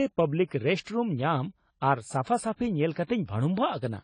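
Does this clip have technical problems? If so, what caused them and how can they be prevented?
Yes. Throughout, the speech sounds dull and smeared, with nothing above 10 kHz and a warbling, fizzy edge on sibilants. This is likely AAC compression at a low bitrate, around 24 kbps, where the coder lowers its cut-off and coarsely quantises the remaining bands. Encoding at a higher bitrate prevents it.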